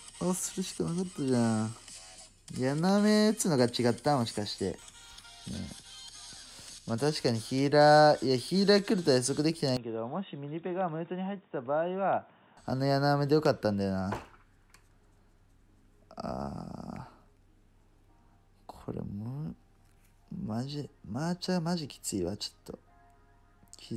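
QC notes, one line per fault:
9.77 to 12.57 s, input switched to a poorer device: the sound abruptly goes dull and boxy, with nothing above about 3.8 kHz. It drops roughly 10 dB in level and picks up a new noise floor sitting well below the signal, then clears again at 12.57 s. Both changes happen without any gap. That's most likely the input hopping to a narrower-band mic or a headset call profile and back again.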